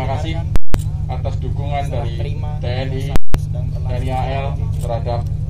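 At 0.56–0.74 s and 3.16–3.34 s, invalid numbers at full scale from a broken calculation pin the output as flat 186 ms waveform slabs: a pop at each edge, silence between.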